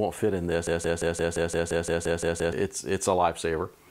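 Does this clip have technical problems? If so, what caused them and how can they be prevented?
Yes. From 0.67 s to 2.53 s the audio falls into a broken-record loop: a fragment about 0.17 s long plays eleven times back to back, and whatever should have sounded in that stretch is gone. The likely cause is a player, encoder or stream that stalled and kept resending its last buffered piece. On a spectrogram or waveform this appears as identical blocks tiling at 0.17 s intervals. Monitoring buffer underruns and muting or resyncing on a stall would prevent it.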